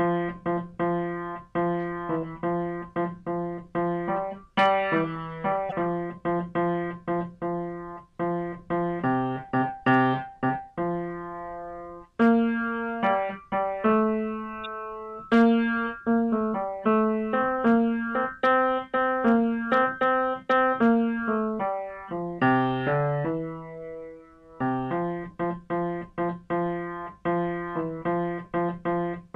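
At 5.69 to 5.73 s and again at 14.64 s, a corrupt frame decoded: damaged compressed data played anyway, a brief squeaky blip spanning a couple of frames, peaking near -20 dBFS and then -25 dBFS, showing as a short vertical smear on a spectrogram.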